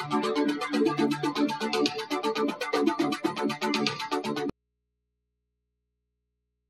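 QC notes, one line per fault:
4.50 s to end: audio dropout to a faint residue. The sound cuts off abruptly, not as a fade, and never returns. Only mains hum remains, roughly 55 dB below the earlier level, likely from a lost source leaving the downstream input open and still live.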